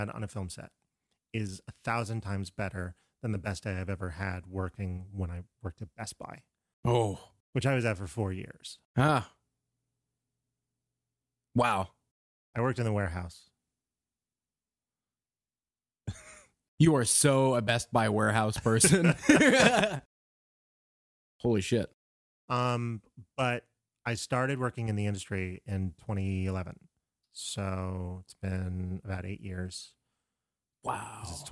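No technical faults can be heard anywhere in the recording; the speech signal stays intact throughout.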